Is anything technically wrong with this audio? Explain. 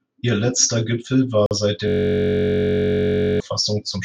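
Yes, the speech has two faults.

A Bluetooth stall runs from 1.46 to 1.51 s. The sound drops to complete silence for about 47 ms and then carries on. The likely cause is radio interference delaying packets on the wireless link: the headphones' small playback buffer ran empty, so output paused until the retransmitted audio arrived. It is heard as a brief, clean gap rather than any distortion.

A system hang loop runs from 1.88 to 3.40 s. The host or its audio driver froze while the sound hardware kept reading the same ring buffer, replaying one 21.33 ms slice, which fits a 1024-sample buffer, 71 times in a row. Because the slice is so short, the repeats blur into a steady, flat buzz at about 47 Hz that replaces the speech for roughly one and a half seconds.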